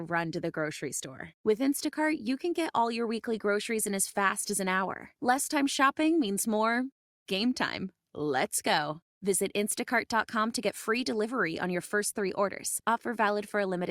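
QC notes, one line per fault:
No faults heard.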